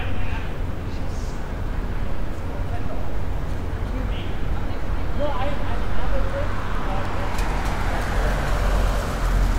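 From 1.77 s to 8.81 s there's a regular click about every 1.76 s, roughly five in all. That's likely clock drift buffer slips: two clocks disagreeing by something like 500 ppm, so the buffer periodically drops or repeats a chunk of around fifty samples.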